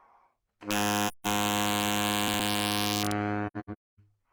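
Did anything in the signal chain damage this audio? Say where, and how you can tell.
Yes. Sample-format conversion let gain wrap in integer overflow. Peaks driven about 6 dB over full scale, roughly one percent of samples, flip sign throughout, giving harsh cracks.

At the codec, AAC frame loss with muting zeroed frames from 1.08 to 1.27 s, about 171 ms, which fits four frames, leaving a soft-edged silent hole.

The same AAC frame loss with muting recurs from 3.47 to 4.00 s. About 427 ms drops out in scattered gaps, the longest near 0.3 s.

In buffering or storage, chunks out of order put a 60 ms chunk one slot late around 2.28 to 2.40 s. This jumbles the sound.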